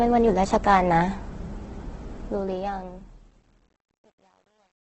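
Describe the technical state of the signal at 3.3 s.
Truncation distortion on a fade is the main fault at 3.3 s. The fade-out runs from 2.19 s to the end at 4.86 s. The volume stage keeps too few bits, which fits roughly 10-bit resolution, and it adds no dither. As the level drops, the waveform collapses into coarse square steps. From 3.02 s onward, which includes this moment, the sound turns gritty. The problem is in the grainy texture of the fade's quiet tail.

The speech also shows heavy coding damage throughout. Nothing is present above 8.2 kHz, and the tone is rough and noisy rather than swirly. That points to Opus compression in its CELT mode, likely at a low rate near 12 kbps. This noisiness is present across the whole clip, whereas the truncation grit grows worse as the level falls.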